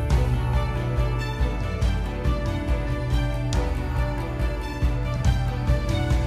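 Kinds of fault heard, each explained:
No technical faults can be heard anywhere in the signal, which holds steady without any audible defect.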